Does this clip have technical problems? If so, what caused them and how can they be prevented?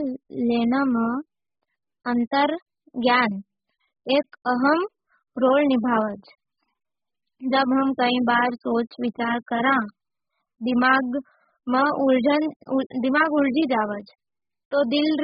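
Yes: throughout, the speech sounds dull and warbly, with nothing above 5.1 kHz, likely from heavy AAC compression at a bitrate around 8 kbps. Encoding at a higher bitrate would prevent it.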